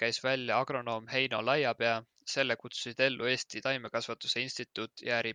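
No technical faults are audible.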